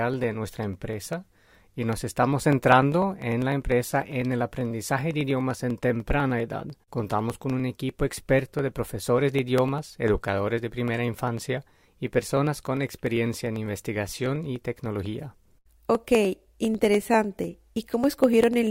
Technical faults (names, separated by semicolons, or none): periodic USB or driver dropouts